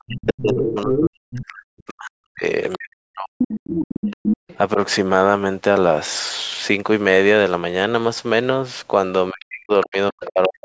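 Right from the start, a second voice comes through, the other side's voice leaking through, sitting only about 5 dB under the speech until 1.37 s. It's likely the loudspeaker playback the echo canceller didn't fully remove. It comes back as a faint blip around 2.72 s, loud again from 3.39 to 4.58 s, and at roughly 15 dB down from 9.41 to 10.49 s.

Overlapping that, the talker gets speech suppressed in double talk. From 0.06 to 4.08 s the voice dips hard, by as much as about 40 dB, for around three seconds in total. There's a slight dip of about 5 dB at 4.74 s, then another deep drop from 9.31 s to the end. That's likely the canceller ducking everything while both sides talk.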